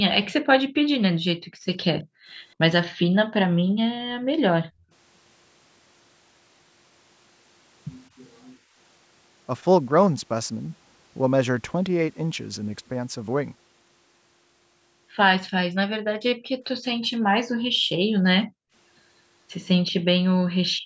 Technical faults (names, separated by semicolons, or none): background gated by the echo canceller; echo leak